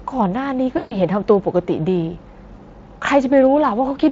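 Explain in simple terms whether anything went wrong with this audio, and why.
From 0.77 to 0.98 s the speech smears into a fading buzz or noise. This is VoIP packet loss concealed by the speech codec, which guessed the missing audio.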